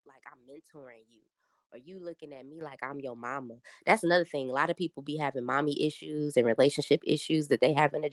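Speech with the microphone volume stepped up three times, each jump instant. At 2.61 s, between "you looking at me" and "like I'm your mama", the level leaps about 10 dB. At 3.63 s, after "like I'm your mama", it rises about 8 dB, and at 4.65 s, just before "of people be having", about 3 dB. Voice and background rise together, so the automatic input-gain control raised the device volume rather than the talker getting louder. On a waveform the envelope steps up sharply at each point, and a spectrogram brightens across all frequencies at once.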